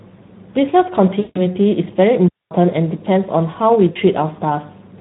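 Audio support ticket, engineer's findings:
Hoarse, grainy, noisy speech throughout, plainly audible codec damage. Speex codec at a low quality setting, which fits roughly 11 kbps. Too few bits for the CELP excitation, so the voice's fine detail is replaced by rough, buzzy approximation.

1.19–1.45 s and 3.91–3.98 s: speech smeared into a fading buzzy tone or coloured noise, then briefly weak. VoIP packet loss concealed by the speech codec, consistent with about 160 ms and 40 ms lost. Decoder extrapolates last pitch and filter, gain decaying, recovery lagging.

2.28–2.51 s: clean hole of near silence, about 230 ms, no noise burst on either side. Digital wireless dropout. Receiver lost too much data and muted with a very short fade until the link recovered.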